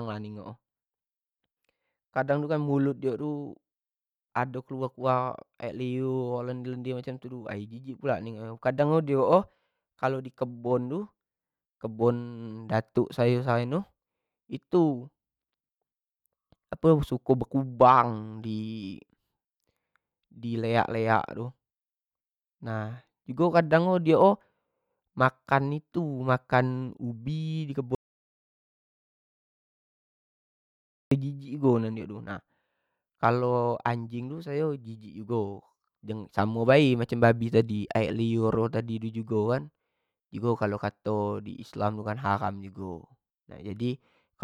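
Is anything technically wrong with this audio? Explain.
Yes. From 27.95 to 31.11 s, just after "ubi di", an audio dropout to silence: input was likely lost while recording continued, so speech cuts to digital silence for 3.17 s.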